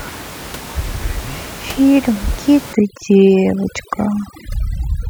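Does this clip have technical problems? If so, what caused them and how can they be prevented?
Yes. From 2.73 s to the end there is overdone noise removal. The reduction is set too strong, so it pulls individual frequency bands down whenever they fall near its noise estimate. The background drops and breaks up into twinkling specks. To prevent it, lower the reduction amount so some room noise, here about 15 dB below the speech, stays audible.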